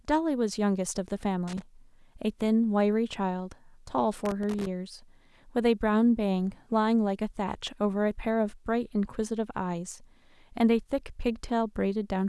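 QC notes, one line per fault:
1.48–1.62 s and 4.26–4.67 s: loose connector crackle. Bursts of irregular scratching over the speech. A worn contact is making and breaking, chopping the signal.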